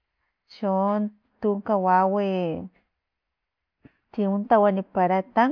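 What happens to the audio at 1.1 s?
Nothing goes wrong at 1.1 s; the speech carries on intact through that moment.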